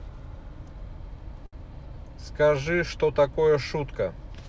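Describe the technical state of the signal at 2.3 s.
At 2.3 s the speech is intact, with no dropout, glitch or distortion, just the ordinary wideband call sound of a G.722 path, whose content stops at 8 kHz.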